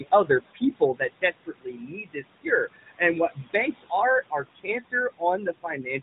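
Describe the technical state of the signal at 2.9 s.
At 2.9 s the speech is being cut by the noise suppressor, from 2.73 to 3.01 s. The suppressor mistakes part of the speech for steady noise and turns it down by about 17 dB, so roughly 200 ms of it sounds swallowed and faint. Unlike a dropout or packet loss, the sound never vanishes abruptly into silence or glitches. The speech fades under the same gain that lowers the room noise.

Around it run noise suppressor artifacts, with about 17 dB of noise reduction. The room noise, which sits about 13 dB below the speech, sinks between words and rises under them. This is frame-by-frame band gating.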